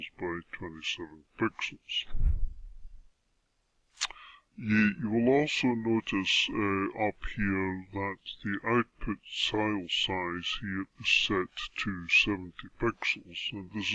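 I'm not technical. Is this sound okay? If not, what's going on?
No. The whole clip sounds slowed down and dropped in pitch, playing at about 0.69 times normal speed and roughly six and a half semitones lower. This is a wrong sample rate fault: the sound was played back too slowly without conversion, which fits audio made at 32 kHz being played at 22 kHz.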